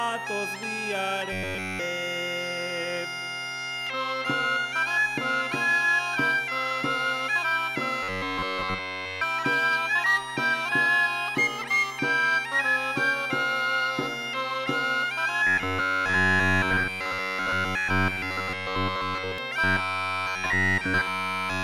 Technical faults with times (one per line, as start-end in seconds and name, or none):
1.32-1.79 robotic sound from repeated short buffers
8.03-9.22 robotic sound from repeated short buffers
15.47-19.38 robotic sound from repeated short buffers
19.64-21.63 robotic sound from repeated short buffers